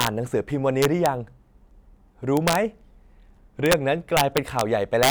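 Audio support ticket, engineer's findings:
Integer overflow in the speech. Violent cracks on loud passages at 0.01–0.07 s (overdrive about 4 dB), 0.82–1.06 s, 2.37–2.55 s, 3.66–3.73 s, 4.17–4.61 s and 5.03–5.1 s (each about 2 dB over). Probable component: a gain or mixing stage in fixed-point arithmetic with no saturation. Peaks past full scale wrap to the opposite sign instead of holding at the limit. This differs from clipping, which flattens peaks into a duller distortion, because every overshoot here becomes a full-range jump and a much sharper crack.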